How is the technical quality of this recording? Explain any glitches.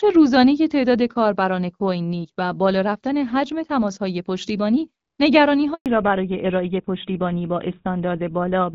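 The recording has two clear glitches, both starting at about 5.7 to 5.9 s. Before them the call sounds like clean HD Voice, with the light coding texture of AMR-WB at a rate that fits 12.65 kbit/s.

Handover gap, 5.74 to 5.86 s: The speech fades within a few tens of milliseconds and then goes completely silent for 120 ms while the call switches networks and no speech frames arrive. A packet-loss concealment would fill a gap like this with smeared or repeated sound. Here there is only a short fade into true silence, and what was said during that time is lost.

Fallback to narrowband, 5.86 s to the end: When the sound returns, nothing remains above 4 kHz, so sibilants lose their edge and airiness disappears and the voice is duller and rougher. The call has dropped to an older narrowband codec, sounding consistent with GSM full rate. A low-bitrate wideband codec also sounds rough, but it keeps content up to 7 kHz. 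This cut is sharp at 4 kHz and persists for the rest of the clip.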